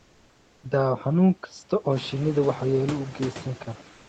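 Throughout the speech, a noise suppressor cuts what it judges to be steady noise by about 16 dB, so the background dips between phrases and swells under them. From 3.97 s to 4.09 s, comfort noise replaces the background, likely from discontinuous transmission of the Opus kind. The textured room sound turns into a smooth, featureless hiss about 1 dB quieter.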